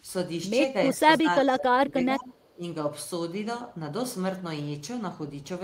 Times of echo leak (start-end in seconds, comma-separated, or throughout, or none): 2.46-2.54